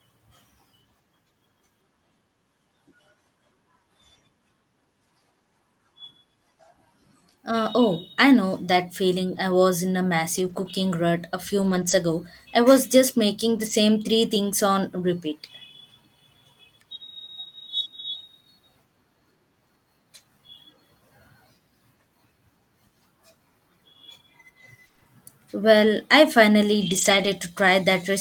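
Lost packets rebuilt from error correction at 9.35 s (after "I know that feeling"), 10.37–10.71 s, 11.59–11.93 s (after "rut a few") and 13.57–13.71 s (before "three things on repeat"). Low-bitrate backup copies carried in the following packets fill 20 to 180 ms without gaps, but those frames sound rougher and noisier.

Scattered short gaps from 24.87 to 27.27 s: roughly five brief losses, none much over 20 ms, are patched by continuing the preceding sound, leaving small ticks and hiccups.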